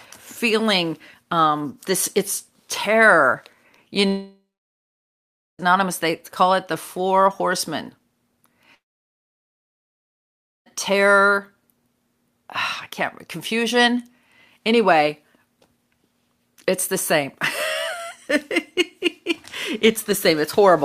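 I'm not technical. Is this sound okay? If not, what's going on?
No. The speech cuts out twice, from 4.07 to 5.61 s and from 8.75 to 10.68 s. Each gap is a long network dropout, likely from audio not arriving. The last sound trails off briefly, then about 1.2 s and 1.9 s of silence follow, and those stretches are lost.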